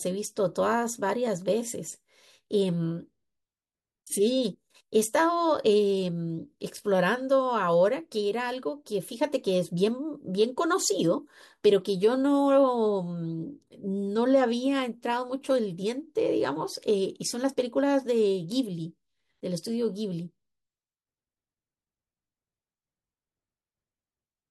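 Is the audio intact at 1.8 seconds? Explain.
Yes, the audio is intact at 1.8 seconds, with no fault audible at that moment.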